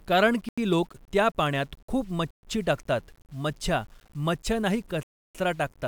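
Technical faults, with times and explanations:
throughout: low bit depth without dither. The speech carries a grainy, gritty distortion that follows the voice, about 35 dB below it, and the quietest parts break up. This fits coarse 8-bit rounding with no dither, likely, so the error tracks the signal.
0.49–0.58 s, 2.31–2.43 s, 5.03–5.35 s: Bluetooth stall. The sound cuts to silence for 88 ms just before "लोक त्या पाण्यात खूप", for 126 ms between "लोक त्या पाण्यात खूप" and "टाकतात मछ्या", and for 315 ms near the end, then resumes. The likely cause is the headphone buffer running dry while delayed packets were resent.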